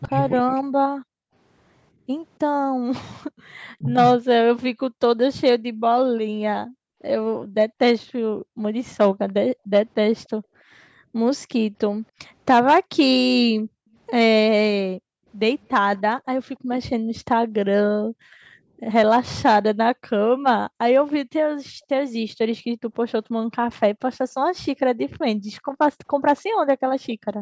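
Hard clipping runs through the whole recording: peaks are driven about 5 dB past full scale, so a small fraction of samples are sliced flat. It sounds like brief crackle on the loudest syllables. On the waveform, squared-off tops appear, and on the spectrogram, thin vertical smears climb toward the 8 kHz ceiling of the call microphone band.

From 0.01 to 0.08 s, an echo leak adds a faint copy of the speech 286 ms late, far below the direct sound. This is likely a loudspeaker echo the canceller failed to remove. A second, even fainter scrap follows at 21.1 s. On a spectrogram, each shows as a ghostly, time-shifted repeat of the harmonic pattern.

Speech suppressed in double talk dips the speech between 0.06 and 0.96 s, deeply, for roughly 0.7 s. It dips again, more shallowly, from 3.78 to 4.24 s. The likely cause is the canceller ducking both talkers at once. These show as sudden holes or notches in the waveform envelope.

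Background gated by the echo canceller pulls the room sound down by about 40 dB in bursts during four stretches: 1.24–11.15 s, 12.84–18.82 s, 20.41–23.51 s and 25.36–27.41 s. The gaps total about two seconds in each of the first two and less in the others. On the spectrogram, the noise floor drops to near-black blocks.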